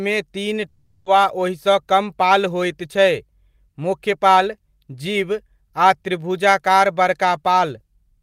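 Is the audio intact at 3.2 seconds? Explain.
Yes, at 3.2 seconds the speech plays through cleanly, with no dropout, click, distortion or other fault at that moment.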